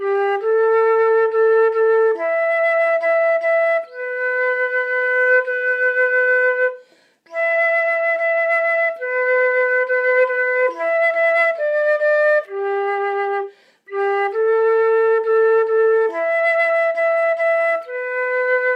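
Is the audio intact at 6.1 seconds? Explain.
Yes, at 6.1 seconds the audio plays through intact, with no dropout, click, distortion or other fault audible at that moment.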